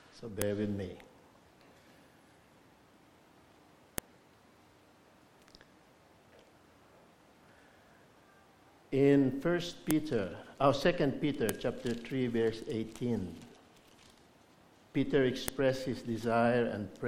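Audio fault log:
0.42, 3.98, 9.91, 11.49 and 15.48 s: file header played as audio. Five sharp, loud clicks, each about a millisecond long, snap out of the sound at these points regardless of what the signal is doing. Each marks the start of a separately joined piece whose WAV header was left in place, so a few dozen bytes of file metadata are read as sample values, producing a brief, sharp jolt in the waveform.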